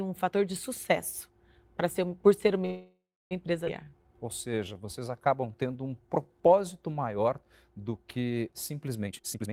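At 2.65 s the speech stops and the last sound is drawn out into a fading buzz or hiss, with about 300 ms of it fully silent. It resumes at 3.33 s from where it left off. This is a call audio freeze, the likely cause being packets held up in transit until the jitter buffer ran empty, so the receiver filled 655 ms and the sound arrives that much later. Just after, at 3.65 to 3.67 s, the audio jumps forward with almost no gap. This is a skip ahead, where around 300 ms was dropped while later audio was already waiting, and the two sides are spliced nearly directly, cancelling much of the added delay. From 3.84 to 6.29 s the speech drags at 86% speed without any change in pitch. This is a jitter buffer slow-down, in which the receiver repeated single pitch periods or pieces of pauses over and over to rebuild its reserve, adding 349 ms. In the final stretch, 9.06 to 9.53 s, the speech suddenly races at 184% speed, again at its normal pitch. 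This jitter buffer speed-up comes from the receiver cutting out short runs of pitch periods, roughly 400 ms in all, to shrink an overfull buffer.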